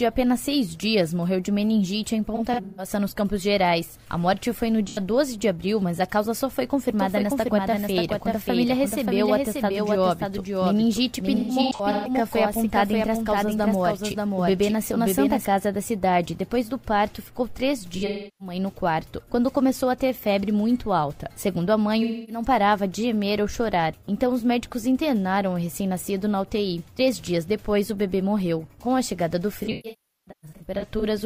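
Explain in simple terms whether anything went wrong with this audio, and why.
AAC frame loss with concealment occurs at 2.35 to 2.89 s, 4.88 to 4.99 s, 11.35 to 12.10 s, 17.97 to 18.55 s, 22.03 to 22.43 s and 29.60 to 31.05 s. Chunks of the compressed stream went missing, and the decoder filled each gap by guessing from the last good sound. Brief gaps come out as smeared, noisy or phasey patches. The longer runs, up to about 0.4 s near the end, fade toward silence and then back in.

A doubled audio track runs from 6.99 to 15.45 s. A second copy of the same sound plays about half a second behind the original, a little quieter, with no echo tail or room sound of its own. It switches on and off abruptly at those times. The likely cause is the sound being captured twice, once through a slower route, so the two copies ended up out of step.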